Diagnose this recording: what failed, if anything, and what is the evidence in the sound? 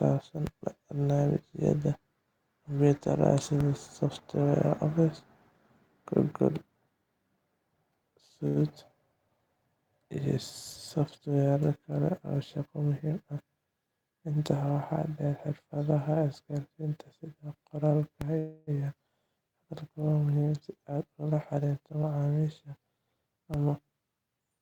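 DC steps at 0.47, 3.61, 18.21 and 23.54 s point to the converter stage. Each is a low thump where the waveform's zero line jumps, then relaxes back as a roughly 20 Hz high-pass drains the offset. The speech carries on unaffected.

A short stall from a late packet at 8.47 to 8.59 s is a network and jitter-buffer fault. The buffer ran dry, so the receiver stretched the last sound by 84 ms, then resumed where it left off. Nothing is lost, but delay grows by 84 ms.

Jitter buffer speed-up occurs at 12.86 to 13.37 s (112%, about 70 ms removed), 20.53 to 22.20 s (111%, about 200 ms) and 24.19 to 24.59 s (115%, about 70 ms). The receiver trimmed pitch-period-sized slices to shed excess buffered delay, so speech sounds hurried at unchanged pitch.

A call audio freeze at 18.38 to 18.70 s, just after the third DC step, holds the last sound as it fades for 287 ms without reaching silence, then continues with nothing missing. 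The likely cause is packets held up in the network, emptying the jitter buffer.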